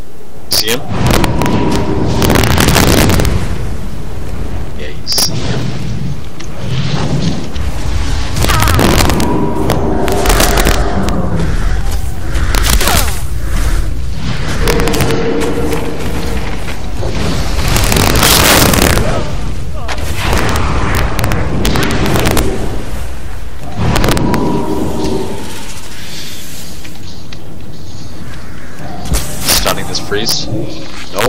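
Integer overflow runs through the whole clip. The signal is driven about 10 dB past full scale, and instead of being held at the ceiling, every peak that exceeds the integer limit wraps around to the opposite extreme. Only a small fraction of samples, under one percent, go over, so the loudest moments burst into violent, snapping cracks. Clipping flattens peaks into a buzzy fuzz. These instead jump the full range at once, which is far harsher and more percussive.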